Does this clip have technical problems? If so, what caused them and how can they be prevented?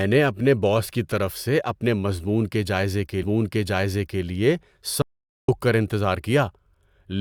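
Yes. The speech cuts to dead silence from 5.02 to 5.48 s, losing about 0.46 s with no room tone, an audio dropout to silence likely caused by momentarily losing the input. Secure cables and wireless links, and monitor live input during recording.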